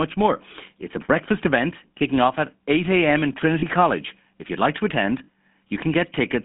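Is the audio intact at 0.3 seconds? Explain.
No. At 0.3 s, as everywhere in the clip, the speech carries GSM full-rate codec damage. This coder rebuilds the voice from a vocal-tract model excited by a thinned, regularly spaced pulse train, which fits the 13 kbps full-rate scheme. That gives a plainly audible buzzy, gravelly roughness. Simple telephone band-limiting to 150 Hz–3.5 kHz would only sound thin, and it is this grainy, rasping texture that marks GSM.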